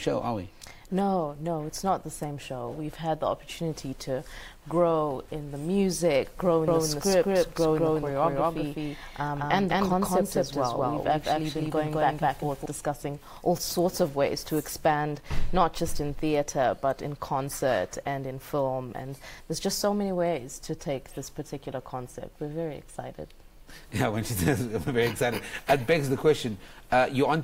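From 6.68 to 12.66 s there's a doubled audio track: a second full-band copy trails around a fifth of a second behind at roughly equal level, with no decay or room colour, cutting in and out abruptly. Likely a slower second capture path or an edit holding two offset copies.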